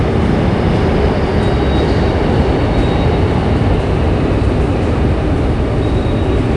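From start to finish the sound has a rough, hissy halo and a smeared, underwater quality, with nothing above 10.6 kHz. The likely cause is Nellymoser compression, which starves weak bands of bits and fills them with noise, consistent with roughly 44 kbps.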